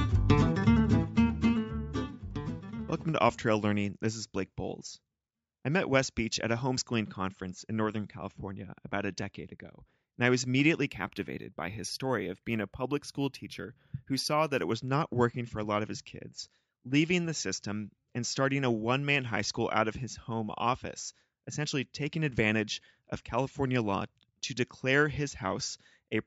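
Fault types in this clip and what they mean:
Imaging from linear upsampling: from 10.87 to 14.72 s, a faint mirrored copy fills 8–16 kHz, about 25 dB down, which fits a 16 kHz-to-44.1 kHz straight-line rate change. It sounds like metallic shimmer, and a spectrogram shows that reflected band above a dulled 8 kHz edge.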